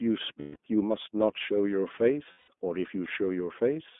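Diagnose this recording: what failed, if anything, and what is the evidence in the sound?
The speech passes through the iLBC codec for its whole length, a codec-stage fault. Nothing is heard below about 200 Hz or above 3.5 kHz, giving a narrowband telephone sound, and the voice has a plainly audible rough, slightly synthetic grain. iLBC codes each frame's excitation independently of the last, so fine detail is coarsened frame by frame. The roughness fits the 15.2 kbps mode with 20 ms frames.

Lost iLBC frames, a network-stage fault, cause two gaps of 160 ms each, at 0.40 to 0.57 s and 2.32 to 2.51 s. Each gap is filled by a held, slightly buzzy vowel-like tone rather than silence. The decoder conceals each loss by repeating the last pitch cycle mixed with noise and fading it. Each gap matches a burst of about eight 20 ms packets. Because iLBC frames stand alone, the voice is right again almost at once after each gap.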